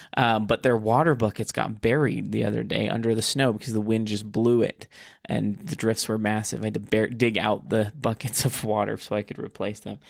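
No faults found; the Opus voice compression leaves only a light coding texture, which fits a hybrid-mode stream at around 24 kbps working as intended.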